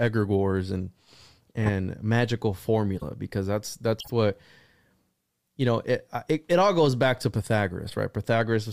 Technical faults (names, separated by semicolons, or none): corrupt frame decoded